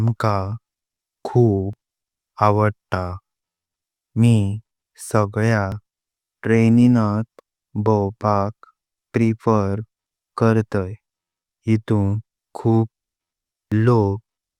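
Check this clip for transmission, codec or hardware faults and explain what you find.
Three tiny skips in the speech occur at 1.73, 5.72 and 13.72 s. These come from overlap between stream segments. Timestamps of adjacent 2.0-second segments overlapped, so the player discarded 6 to 16 milliseconds of genuine audio, leaving an abrupt waveform jump.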